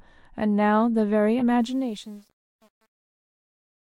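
A corrupt frame decoded at 1.40 s in this speech recording gives a brief glitch near -20 dBFS: damaged bits in a couple of compressed frames put energy at the wrong frequencies. Truncation distortion on the fade from 1.6 s is worst from 1.91 s onward, where the fade-out turns gritty because the level stage keeps too few bits without dither, which fits an 8-bit stage.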